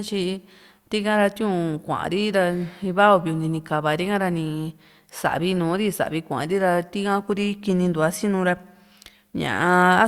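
No faults are audible anywhere in this speech recording.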